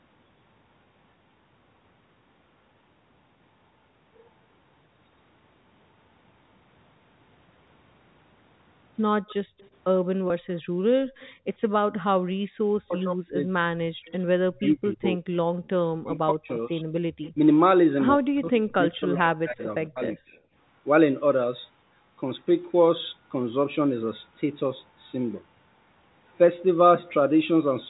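On one side of this speech recording, a loudspeaker's output was picked up by the microphone, and the echo canceller failed to remove all of it. That is the likely cause of the echo leak: a faint delayed copy of the talker comes back at 9.29 to 9.69 s, 11.2 to 11.32 s, 14.06 to 14.67 s, 17.24 to 17.31 s and 19.6 to 19.64 s. It trails the original by 104 ms in the first three, then 116 ms and 137 ms, and sits about 20 to 30 dB below the direct voice. The same canceller also clamped the microphone while the loudspeaker was active, so the background is gated by the echo canceller. Between 9.45 and 12.58 s the room sound drops by up to about 35 dB, for around 0.7 s in all, and at 15.54 to 15.64 s it briefly dips by about 16 dB before coming back. At 10.28 to 10.30 s there is packet loss with pitch repetition: 20 ms of audio went missing, consistent with a single lost packet, and the receiver bridged it by repeating the last pitch cycle, which comes through as a short, slightly buzzy held sound. 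From 12.87 to 20.21 s both ends were talking at once. The canceller most likely could not separate its own talker from the loudspeaker echo and turned everything down, so the speech is suppressed in double talk. The voice dips by as much as about 35 dB or breaks up in pieces, for roughly 4 s in total across that span.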